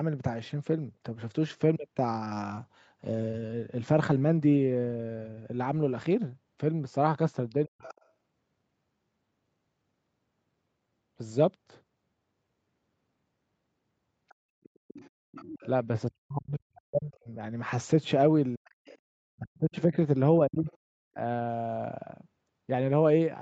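From 7.50 to 8.05 s a faint second voice sits some 20 dB under the speech. This is the other side's voice leaking through, most likely because the device's loudspeaker output reached its microphone and the echo canceller did not remove all of it. Inside that window, at 7.66 to 7.83 s, the talker drops by something like 40 dB for around 150 ms. That is speech suppressed in double talk, likely the canceller ducking everything because it could not tell the local voice from the echo while both sides spoke.

Leakage returns from 14.29 to 15.67 s, again around 20 dB down. From 16.08 to 17.30 s the speech is cut back for about a second in total. A short dip follows at 18.57 to 18.80 s, overlapping a fainter thread of the other voice from 18.65 to 18.98 s at roughly 25 dB down. The last suppression runs across 19.39 to 21.18 s, losing some 700 ms in pieces. A brief scrap of the far voice, about 30 dB down, surfaces at 20.69 to 20.77 s.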